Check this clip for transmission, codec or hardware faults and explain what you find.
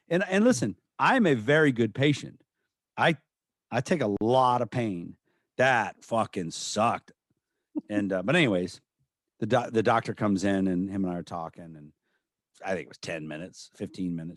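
One codec fault appears in the speech. From 4.17 to 4.21 s there is a gap at a join of encoded pieces: two separately encoded segments were butted together untrimmed, so encoder start delay and final-frame padding leave about 45 ms of silence with smeared edges before the speech resumes where it stopped.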